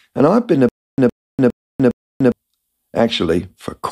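From 0.69 s to 2.32 s the speech breaks into a stutter with silent gaps: a 114 ms fragment plays, then about 294 ms of dead digital silence, and the same fragment returns four times at a steady 408 ms period. This is likely a stalled player or stream replaying its last chunk on each retry. Plain dropouts would not repeat the same sound, and a seamless loop would have no silence between bursts. The speech meant for that span never arrives.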